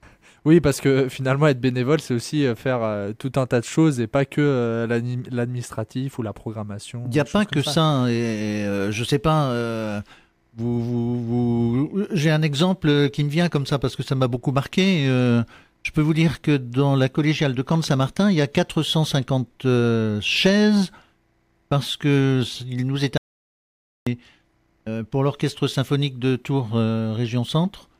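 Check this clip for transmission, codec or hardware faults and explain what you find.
There's one clear fault, an audio dropout to silence running from 23.17 s to 24.07 s, so just under 0.9 s goes missing. The sound stops abruptly mid-flow, sits in dead digital silence with no room tone at all, then snaps straight back in. That pattern points to the input likely being lost briefly, from a loose connection, a link failure or an accidental mute, while the recorder kept writing silence. Whatever happened in that gap isn't recoverable.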